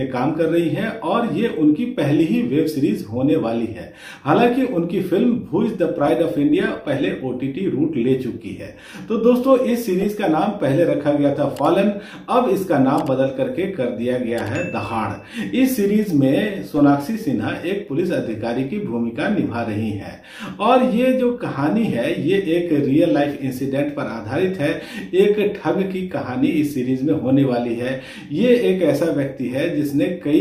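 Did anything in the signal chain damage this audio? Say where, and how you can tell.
Yes: a call bitrate drop at the codec, 5.98 to 7.27 s. Audio turns coarse without gaps, unlike packet loss, which fits Opus falling from about 96 to 28 kbps.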